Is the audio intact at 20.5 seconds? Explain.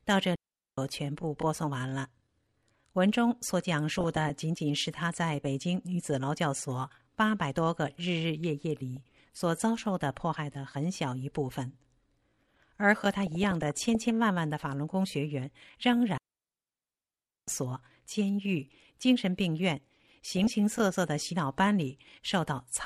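No. At 20.5 seconds the speech falls inside a burst of DAB burbling that runs from 20.27 to 20.54 s. Bit errors have slipped past the error correction into the audio data. The burst covers what sounds like about a dozen frames, consistent with an error rate somewhere under 1 percent. Corrupted samples put short blips of noise into single sub-bands, and corrupted scale factors make sub-bands jump in level for up to a frame. The result is burbling laid over the speech.

Beneath that burst, and across the whole clip, there is MP2 compression. The speech sounds dull, with a granular, gurgling grain as upper bands flicker in and out. The remaining sub-bands are coarsely quantised. The degree of damage likely points to an MPEG Layer II stream at a low rate, around 80 kbps.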